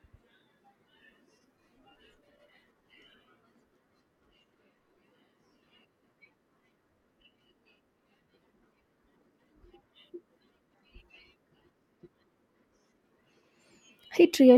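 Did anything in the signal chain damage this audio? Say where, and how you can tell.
No, nothing in the signal chain has damaged this speech.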